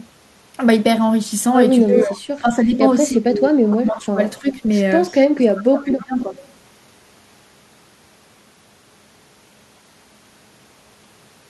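From 1.9 to 2.8 s the speech dips by about 10 dB, then from 3.14 to 4.47 s and 5.34 to 6.37 s it is turned down by up to about 30 dB. This is speech suppressed in double talk, likely an echo canceller turning down the talker while the far side also spoke. An echo leak appears across this span: a delayed copy of the voice, 314 ms behind, appears at 2.0 to 2.04 s (only about 5 dB below the speech), 3.68 to 4.01 s, 5.09 to 5.19 s and 5.78 to 6.47 s (about 20 to 30 dB down). It is likely loudspeaker pickup the canceller failed to remove.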